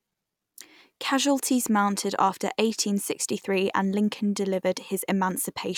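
No technical faults are audible.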